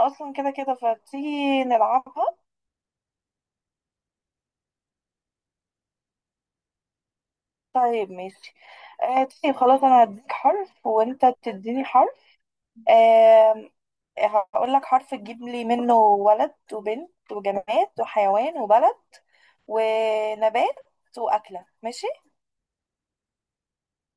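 A speech recording, and nothing in it registers as a technical fault at any point.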